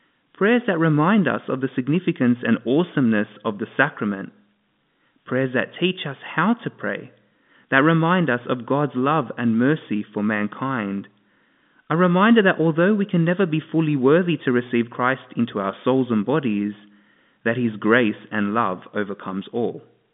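Nothing goes wrong anywhere here; the speech just sits in the narrow band of a G.711 A-law phone line, about 200 Hz up to 3.6 kHz with nothing above 3.8 kHz, which is exactly how that kind of connection carries it.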